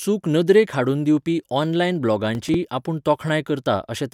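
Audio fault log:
2.35–2.54 s, processor overload crackle: just after "नदरेक हाडून दिवपी ऑनलायन", a short burst of gritty crackle tears across the speech for about 0.19 s, then stops. The processor fell behind and missed several deadlines in a row, and each missed buffer was filled by repeating a scrap of old audio with hard edges. The spacing of the clicks fits very short buffers of around 5 ms, with roughly five of them missed, so the joins pile up into a brief rasp rather than one click.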